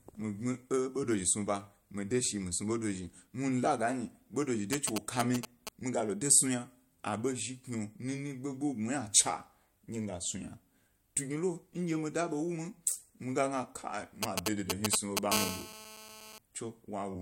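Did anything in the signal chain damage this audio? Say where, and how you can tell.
Yes. The analogue wiring picked up GSM signalling bursts from a nearby 2G phone, from 4.73 to 5.69 s and again from 14.23 to 15.32 s. Each stretch is a galloping dit-dit-dit of short buzzes at 217 Hz, unrelated to the speech. The first sits at roughly the speech level, and the second is around 5 dB louder. The phone was sending brief groups of radio pulses before a call, and an analogue stage rectified them into audible bursts.

The second episode runs straight into GSM phone buzz from 15.32 to 16.38 s, about 4 dB below the speech. It is a hard, raspy, continuous buzz at 217 Hz with many harmonics, again independent of the speech. This is the same interference path, in the analogue wiring. Once the call was established, the handset transmitted a burst every 217th of a second without gaps, and the rectified pulse train became steady instead of grouped.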